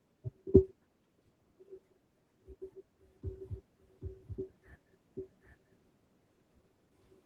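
The whole thing carries Opus voice compression at what sounds like a low bitrate, maybe 16 kbps, so the speech is muffled and a bit hoarse, with a faintly robotic edge. From 3.26 s to the end there's a doubled audio track: an equally loud, dry copy trailing roughly three-quarters of a second behind, likely from a second, slower capture path.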